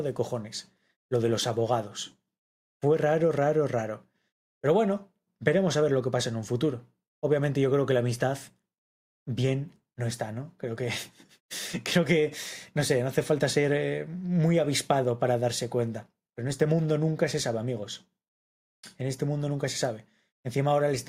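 Nothing stood out as a technical problem on listening.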